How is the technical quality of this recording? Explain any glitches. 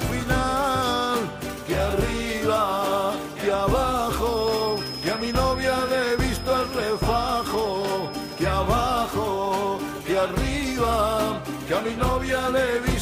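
A thin, steady whistle at 5.1 kHz sits behind the sound from 4.22 s to 8.59 s. It stays around 15 dB below the main signal and swells and fades slowly in level. This is a feedback whistle, likely from a loudspeaker-to-microphone loop running just at its feedback threshold. That loop gain lets one high frequency circulate and sustain itself without building into a full howl, which is why the tone holds steady rather than climbing.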